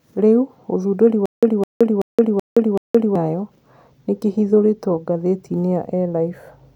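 From 1.26 s to 3.16 s the speech breaks into a stutter with silent gaps. A fragment about 210 ms long plays, then about 170 ms of digital silence follows, and the same fragment returns five times on a steady 380 ms cycle. The cause is likely a stalled player or stream that replayed its last buffered fragment at each retry and then ran dry. The speech that belonged in that stretch never arrives.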